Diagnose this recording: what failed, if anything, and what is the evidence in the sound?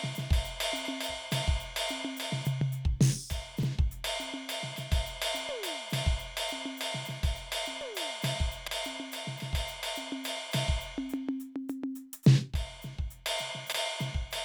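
The failure is overlapping chunks, at the buffer or block-processing stage. The music stutters briefly three times: at 3.63 to 3.68 s, 8.68 to 8.72 s, and 13.72 to 13.77 s. The events fall about 5 s apart. At each one, roughly 48 ms of audio plays twice, heard as a click and a skip back. The music was handled in 5 s blocks, and each block began about 48 ms before the previous one ended.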